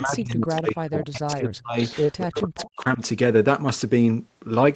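From the start to 1.78 s the speech is pulled down in patches, by roughly 40 dB at its deepest and for about one and a half seconds in total. This is speech suppressed in double talk, likely caused by an echo canceller that could not tell the local talker from loudspeaker echo while both sides spoke, so it attenuated everything. Inside that stretch, from 0.56 to 0.72 s, a faint delayed copy of the speech appears. This is echo leak, arriving 258 ms late at about 15 dB below the direct speech.

The echo returns between 1.84 and 2.4 s with the same delay and level, and the speech is suppressed again from 2.23 to 2.58 s, dropping by roughly 40 dB for about 300 ms. The leak recurs briefly from 2.57 to 2.7 s. A last, shallower suppression follows from 2.76 to 3.0 s, a dip of roughly 10 dB over about 150 ms. The leaked copies are likely residual echo, from a canceller that removed most but not all of the loudspeaker signal. 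Underneath, the audio carries the coding texture of a 20 kbps Opus path, with nothing above 8 kHz.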